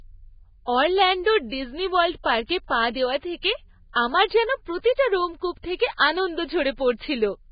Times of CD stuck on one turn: none

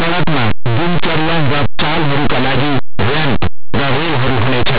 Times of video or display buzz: none

